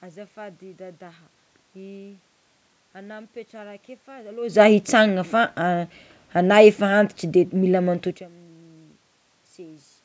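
No technical fault can be heard in the signal: the speech carries the ordinary call microphone processing with nothing above 8 kHz, the background noise belongs to the room itself, and the level changes around 4.5 s and 8 s come from the talker moving relative to the microphone, not from the system.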